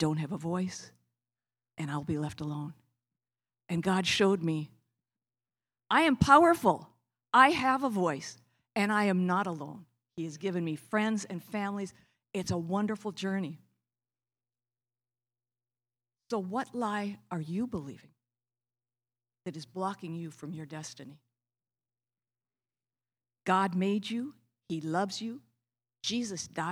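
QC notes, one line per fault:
No faults found in this clip.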